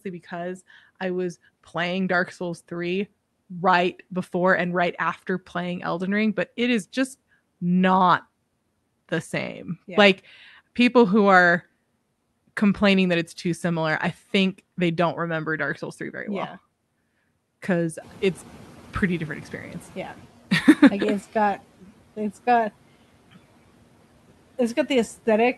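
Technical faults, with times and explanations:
18.01–20.27 s, noise suppressor catching up: room noise jumps about 15 dB near 18 s and first passes with less reduction, then sinks about 8 dB over 2.26 s as the noise estimate adapts; one smooth settling, unlike pumping that follows the speech.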